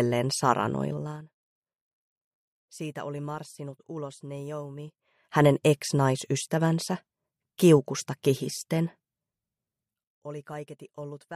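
From 0.88 to 1.25 s there is zipper noise. The level drops by roughly 15 dB in 2 dB steps, about twenty a second, with no smoothing between them. Each jump clicks, so a fast ticking rides on the sound during the fade.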